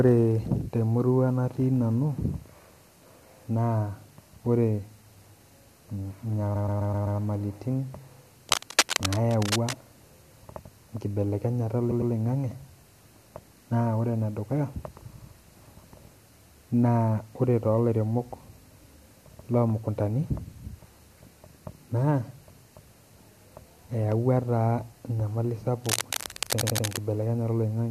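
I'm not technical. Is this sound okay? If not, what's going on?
No, there are two kinds of problems in this speech clip.

The first is repeated frames. A tiny slice of the recording got played again and again, like a skipping CD. Around 6.55 to 7.19 seconds, a piece about an eighth of a second long repeats five extra times, adding roughly two-thirds of a second of stutter. Shorter skips, each a slice around a tenth of a second long, hit at 11.90 to 12.12, 15.15 to 15.32 and 26.60 to 26.86 seconds.

The second is cable scratch noise: bursts of rough, scratchy rustling laid over the speech, fairly loud and not far below the voice itself. You'll hear it from 8.49 to 9.78 seconds and again from 25.84 to 26.98 seconds, where it overlaps that last stutter. The likely cause is a worn cable or plug being jiggled, making the connection crackle while it moved.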